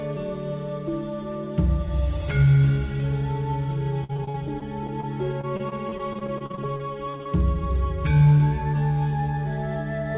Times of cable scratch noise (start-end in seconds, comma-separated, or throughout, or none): none